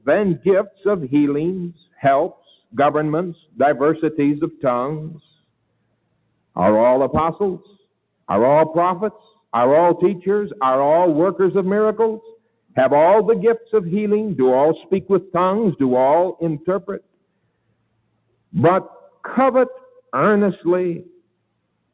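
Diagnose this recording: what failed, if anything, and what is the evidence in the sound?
The failure is in call processing: a speech-tuned noise suppressor was left running on material that isn't speech. It keeps mistaking sustained tones, ambience and reverb tails for noise and pulling them down, while onsets slip through. Across the whole clip the level swings by roughly 10 dB as it clamps and releases, giving a pumping, fluttery, thinned-out feel. Everything sits under a hard ceiling around 4 kHz, which fits a G.711 mu-law path at 64 kbps.

The worst moments are where the sound was cut by the noise suppressor outright: 0.0–3.59 s, 4.52–6.56 s, 7.59–8.25 s, 9.18–9.45 s, 12.36–13.73 s, 14.82–15.34 s, 16.59–20.1 s, and 21.11 s to the end. Most dips bottom out about 20–22 dB down. The one at 14.82 s is gentler, about 13 dB. The most affected stretch, 16.59–20.1 s, spends around two seconds ducked. 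Sustained and decaying parts sink or get their tails chopped, and sharp transients mostly survive.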